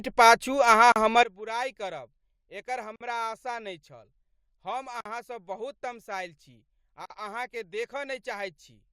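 Separately encoded pieces of the speech were joined without trimming the encoder's start delay and end padding, leaving a gap at each join. The first, at 0.92 s, is a 38 ms dropout with smeared edges, after which the speech resumes where it stopped.

At 1.23 s the level of the speech and its background noise falls together by about 18 dB in a single step and stays down to the end. This is likely a sudden gain jump, with the digital gain changed instantly rather than ramped.

The gaps recur every 2.0 s, at 2.96 s, 5.01 s and 7.06 s, each now 48 ms long. Every one cuts the continuous sound with a silence whose edges the codec smears before the speech carries on, marking where encoded pieces were butted together.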